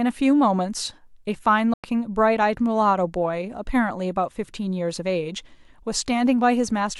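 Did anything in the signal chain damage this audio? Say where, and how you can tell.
Yes, the speech drops out from 1.74 to 1.84 s, a hole of about 100 ms where the output goes dead and then comes straight back. The edges are abrupt or fade within a few milliseconds, and when the sound returns it has moved on in time rather than picking up where it stopped, so the audio kept running while nothing reached the output. That's the wireless playback link, most likely a Bluetooth dropout: packets arrived too late and got discarded, and a gap that size fits roughly five of them going missing.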